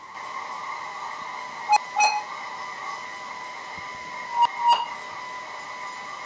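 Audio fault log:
Throughout: echo with no canceller. Every phrase of speech returns around a third of a second later as a fainter copy, about 17 dB down, sounding thin. The far end's loudspeaker is feeding its microphone, and nothing strips that pickup before it comes back over the network. Unlike room reverberation, which smears directly onto the tail of each sound, this copy arrives as a distinct, delayed repeat after a clear gap.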